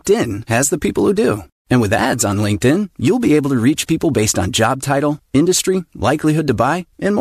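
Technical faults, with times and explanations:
6.23 s, AAC frame loss with concealment: just after "on job title industry", a single block of coded audio about 10 ms long failed to arrive, and the decoder patched the hole by re-using the last good spectrum with its phase scrambled and energy held. The speech briefly smears into a noisy, phasey blur rather than a clean dropout. The short gap fits the small frames of a low-delay AAC stream, likely AAC-ELD.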